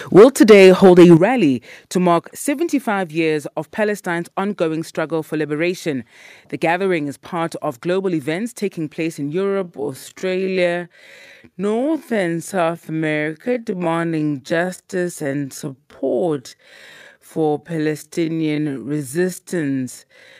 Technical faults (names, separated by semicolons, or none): microphone overload; microphone volume stepped down; time-stretched section